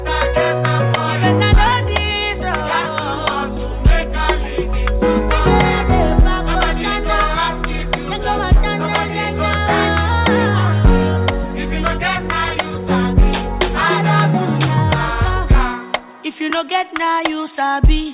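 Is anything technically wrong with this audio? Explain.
No, nothing technically wrong can be heard here.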